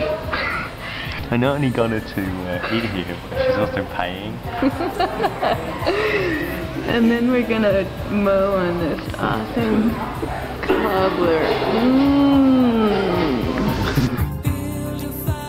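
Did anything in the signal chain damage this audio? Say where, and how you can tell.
No, nothing along the chain seems to have damaged this audio; I can't hear anything that points to a problem at any stage.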